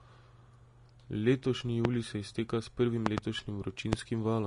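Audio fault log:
Throughout: Vorbis compression, likely at a low bitrate near 35 kbps; treble above 10.6 kHz is gone and the remaining detail is coarsely quantised into audible graininess.
1.85–1.87 s, 3.06–3.20 s, 3.93–3.95 s: loud pop, sharp transients about 20–25 dB above the speech, two in quick succession in the second event, likely voltage spikes; the speech continues underneath, with the words "se izteka s prvim" just after the first and just before the second.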